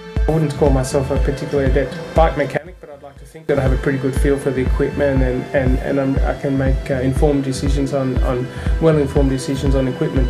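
From 2.58 to 3.49 s the sound collapses to a faint, hollow remnant, about 22 dB down, with its centre and low end largely gone. The likely cause is one channel inverted: reversed polarity cancels everything the two channels share when summed to mono.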